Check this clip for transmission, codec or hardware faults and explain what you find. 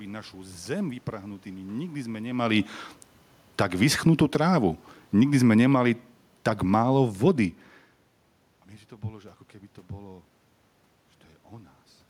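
One fault shows up, and it occurs twice: automatic gain falling, from 3.45 to 4.41 s and again from 5.04 to 5.82 s. In each case the gain control judges the input too loud, or its background noise too strong, and pulls its gain down gradually, by about 5 dB and then about 6 dB. The speech sinks over those spans, and the room noise beneath it drops by the same amount. The level changes near 2.5 s and 8 s are the talker moving, not the system.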